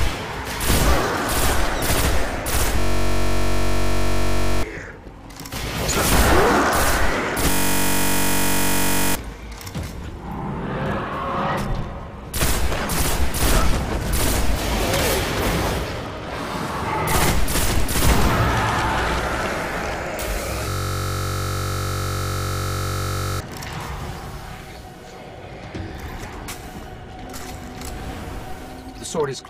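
The system froze at 2.80–4.63 s, 7.51–9.15 s and 20.69–23.40 s while the hardware kept cycling its ring buffer, a system hang loop. One 21.33 ms slice, fitting a 1024-sample buffer, repeats as a 46.9 Hz buzz, replacing roughly 2, 1.5 and 3 seconds of audio.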